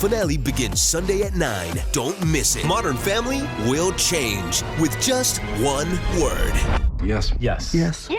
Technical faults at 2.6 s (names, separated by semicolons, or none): stream segment skipped